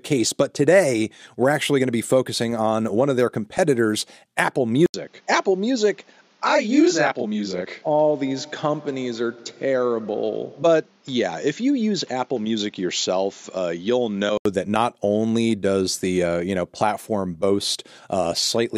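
At 4.86 s an 80 ms gap opens, and the sound then turns dull and boxy, with nothing above 7.3 kHz, a level roughly 5 dB lower and a new background noise around 35 dB beneath the signal. It clears again at 14.45 s. The likely cause is the input switched to a poorer device. Unlike a codec narrowing the band, the change brings its own noise floor, level and tone, all at once.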